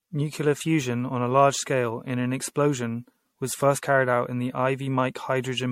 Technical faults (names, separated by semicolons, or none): generation loss